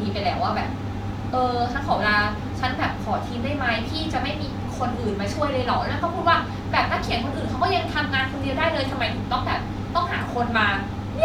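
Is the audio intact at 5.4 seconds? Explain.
Yes, the speech runs through 5.4 seconds without any audible dropout, glitch or distortion, so the audio is intact at that moment.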